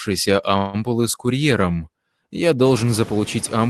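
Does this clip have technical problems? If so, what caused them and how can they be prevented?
Yes, two things stand out in this speech clip.

There are noise suppressor artifacts all the way through. The suppressor pulls down whatever bands it judges to be steady noise, frame by frame, by about 21 dB, so the background drops away in the pauses and comes back up under the talking. The leftover noise has a fluttery, warbly edge, and the voice gets a thin, watery quality. It's most noticeable after the room noise steps up around 2.5 s. To prevent it, ease off the suppression strength or cut the noise at the source with a quieter room or a closer mic.

There's a call audio freeze from 0.57 to 0.76 s. The sound doesn't go silent. The last bit of audio is stretched into a fading buzz or hiss for about 163 ms, and then the speech carries on exactly where it stopped. Nothing is lost, but everything after it runs about 163 ms later. 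That's the likely signature of packets arriving late and the jitter buffer running dry. The audio tops out around 12 kHz, consistent with an Opus call link. To prevent it, use a steadier network connection or allow a slightly deeper jitter buffer.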